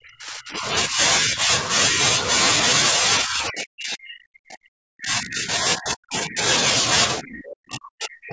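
Speech suppressed in double talk, likely an echo canceller mistaking overlapping talk for echo, pulls this speech down in pieces: a dip of about 15 dB at 0.88–1.0 s, shallow dips of about 5 dB at 1.2–1.51 and 1.89–2.0 s, and near-dropouts of roughly 30 to 40 dB at 0–0.68 s, 2.98–6.41 s and 7.19 s to the end.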